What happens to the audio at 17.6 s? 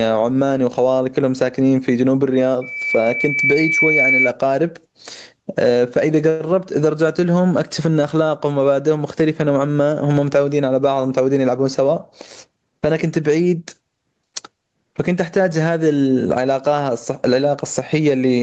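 At 17.6 s, as throughout the clip, there is gain pumping. Likely the input gain is set far too high and a fast limiter pulls it down on each loud syllable. The gain swings by roughly 20 dB, leaving the sound squashed.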